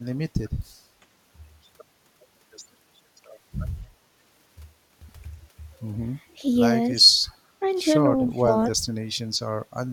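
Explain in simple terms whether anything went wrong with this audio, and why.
Two things went wrong in this speech clip.

First, there are two blocks of digital silence, at 5.0 s and 8.13 s. The sound simply stops for a moment, about 20 ms and then 10 ms, and jumps back. The shorter gap is heard as a tick. The program likely failed to deliver sound in time.

Second, the speech is suppressed in double talk at 6.25 to 6.46 s, 6.93 to 7.26 s and 8.28 to 8.54 s. The voice suddenly gets much quieter or breaks up for a moment. This was likely the echo canceller mistaking the talker for echo while someone else spoke.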